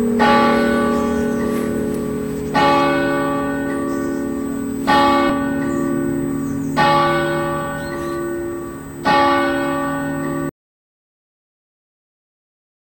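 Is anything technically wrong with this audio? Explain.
Yes. There are three faults.

A USB whine runs through the whole clip. It is a fixed tone at 8 kHz, strongest at its 16 kHz multiple, about 25 dB below the sound. USB microframes of 125 microseconds draw current in bursts. That current leaks into the audio through power or ground.

A skip ahead occurs at 5.29 to 5.31 s. About 0.4 s of audio is missing. Playback jumps forward with no gap in between. The audio was dropped on the way, or discarded by an overflowing jitter buffer while later audio waited. The two sides join almost directly.

An audio dropout to silence starts at 10.49 s and lasts to the end. The sound cuts out mid-flow. Plain silence follows, with no room tone at all. The input was likely lost through a disconnected device, a failed link or a stray mute, while recording continued.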